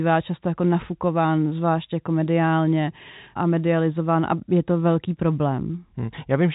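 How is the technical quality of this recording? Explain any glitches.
No glitches can be heard in the recording. The speech comes through G.711 telephone coding, so there is nothing above about 3.8 kHz and the codec leaves at most faint traces.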